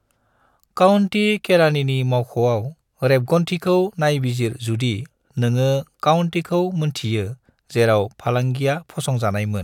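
No technical faults are audible.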